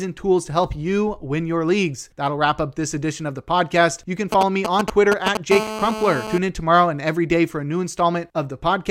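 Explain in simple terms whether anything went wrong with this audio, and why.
A nearby 2G mobile phone leaked its radio pulses into the audio circuit twice, which turned them into audible noise.

From 4.32 to 5.37 s, GSM signalling bursts: the phone sent short groups of pulses, heard as galloping ticks and brief buzzes about as loud as the speech.

From 5.52 to 6.38 s, just before "in tomorrow and every", GSM phone buzz: the phone transmitted steadily as in a call, giving a harsh, raspy hum repeating 217 times a second.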